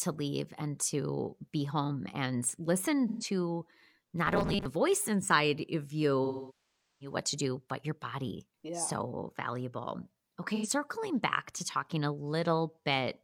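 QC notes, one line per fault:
3.08–3.24 s, 6.24–7.16 s and 10.55–10.67 s: AAC frame loss with concealment. The decoder covers about 128 ms, 768 ms and 85 ms by rebuilding from the last good spectrum. The short gaps sound smeared and noisy, and the long one sinks toward silence before fading back.
4.27–4.65 s: robotic sound from repeated short buffers. Audio likely arrived too late, so a 5 ms buffer looped for roughly half the span, imposing a rigid, metallic 200 Hz buzz.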